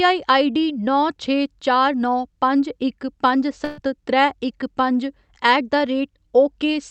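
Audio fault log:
3.64 to 3.79 s, burst of packet loss: a run of packets never made it in time, so for about 130 ms the receiver kept stretching the last bit of sound it had and letting it fade, which is why you hear a brief held, smeared tail instead of a clean dropout. When the audio picks up again, roughly 130 ms of speech has simply gone missing. It's all passing through the call codec, whose top end stops around 8 kHz.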